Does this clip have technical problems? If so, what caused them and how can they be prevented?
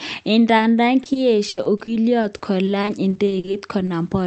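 Yes. Between 0.57 and 0.61 s there is a short concealed packet loss. About 20 ms of audio never reached the decoder in time, and the receiver patched the hole by extending the preceding sound before crossfading back, which leaves a brief smear. Forward error correction and a slightly deeper jitter buffer would let such isolated losses be recovered instead of guessed.

From 1.03 to 3.89 s there is repeated packet loss, producing a robotic sound. There are 19 separate gaps, the longest 80 ms, totalling 460 ms, so about 16% of that stretch is synthesized continuation rather than real signal, giving choppy speech. Fixing the congested or unstable network link, or prioritizing the call traffic, would prevent these loss bursts.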